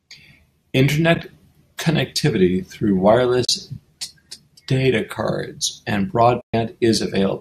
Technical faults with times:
1.15-1.23 AAC frame loss with muting
3.44-3.49 AAC frame loss with muting
6.41-6.54 AAC frame loss with muting

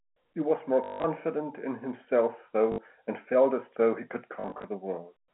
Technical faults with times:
0.84-1.04 packet loss with last packet repeated
2.72-2.78 packet loss with last packet repeated
4.40-4.64 packet loss with last packet repeated

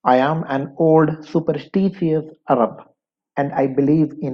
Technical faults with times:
0.10-4.28 clock slip clicks

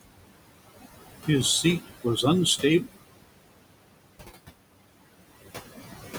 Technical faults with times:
0.00-6.19 noise suppressor artifacts

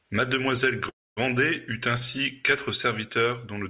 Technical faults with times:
0.89-1.34 call audio freeze

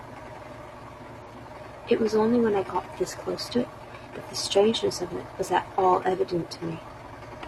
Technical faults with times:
1.22-1.27 damaged data in a compressed stream
3.52-3.56 damaged data in a compressed stream
5.74-5.78 damaged data in a compressed stream

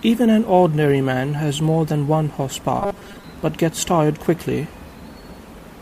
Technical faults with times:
2.80-3.24 robotic sound from repeated short buffers

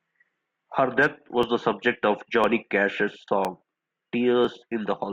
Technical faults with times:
0.43-4.45 periodic USB or driver dropouts

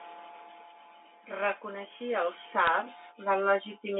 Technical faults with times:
1.25-3.95 automatic gain rising
2.67 bit errors on a digital phone line

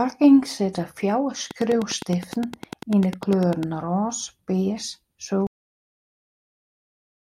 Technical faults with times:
1.51-3.64 train of clicks
5.47-7.40 cut-off end

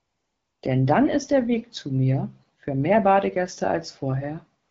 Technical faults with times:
0.00-0.61 AMR comfort noise
4.63-4.70 AMR comfort noise

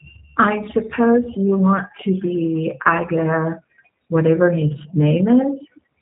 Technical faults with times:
0.00-6.01 G.729 codec

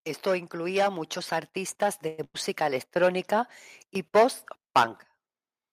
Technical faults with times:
0.23-3.59 automatic gain rising
2.07-2.20 call audio freeze
2.24-2.36 burst of packet loss

